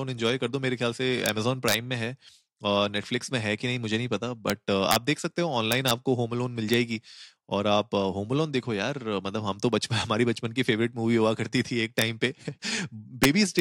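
Violent, sharp cracks break through the loudest moments of this speech at 1.26–1.29, 1.68–1.74, 4.50, 4.91–4.96, 5.72–5.91, 6.74, 11.99–12.02 and 13.24–13.59 s. This is integer overflow: peaks pushed about 0–2 dB past the top of the integer range wrapped to the opposite sign instead of being limited.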